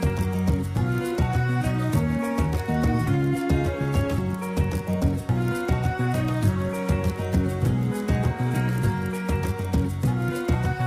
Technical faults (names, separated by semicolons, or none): dropped buffer (overrun)